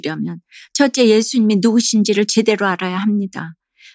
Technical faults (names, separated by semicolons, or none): none